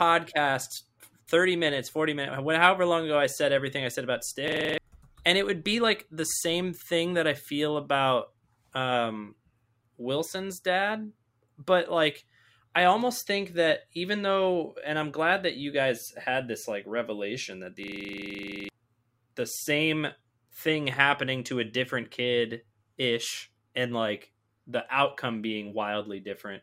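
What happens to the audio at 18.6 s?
A system hang loop runs from 17.84 to 18.69 s: the driver froze while the hardware replayed one 42.7 ms buffer, fitting 2048 samples, so the speech becomes a rough 23.4 Hz stutter. The waveform shows identical repeating blocks, the spectrogram evenly spaced vertical stripes.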